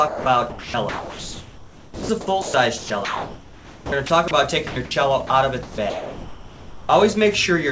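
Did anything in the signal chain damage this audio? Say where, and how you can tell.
Yes, at the call-processing stage. Sound chopped by the voice detector runs from 0.08 to 2.09 s, 2.42 to 4.31 s and 5.63 to 6.89 s, with roughly 1.6, 1.2 and 1.1 s replaced by comfort noise. The likely cause is the sender's detector toggling repeatedly. On a spectrogram, real content alternates with flat, featureless noise patches. The waveform shows steady low-level stretches.

Sound dropped by the voice detector occurs at 4.67 to 4.76 s (90 ms) and 5.27 to 5.30 s, where it gives way to steady noise. The detector likely mistook quiet sound for background. The waveform shows brief flat noise segments. The spectrogram shows uniform noise slivers, capped at 8 kHz like the surrounding G.722 call audio.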